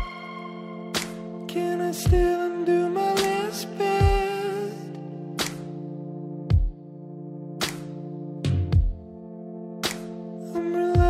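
Nothing here sounds technically wrong to me; the audio just runs along with no problem worth pointing out.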